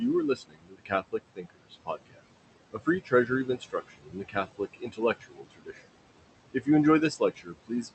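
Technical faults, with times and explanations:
Throughout, noise suppressor artifacts: the room noise, about 12 dB below the speech, is pulled down by about 20 dB frame by frame, so the noise sinks between the words and rises under them.
0.35–1.14 s, 1.35–2.22 s, 2.73–5.81 s, 6.54–6.68 s and 7.19 s to the end, speech cut by the noise suppressor: quiet consonants and word endings are mistaken for noise and dropped by about 21–22 dB (about 15 dB at 6.54 s), so they sound swallowed. Roughly half a second is lost in each of the first two spans and about 1.5 s in the longest.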